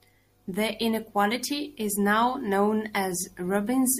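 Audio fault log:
No faults detected in this speech recording.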